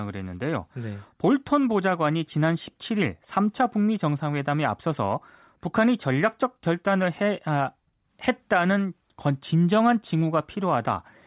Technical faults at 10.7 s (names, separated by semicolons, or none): none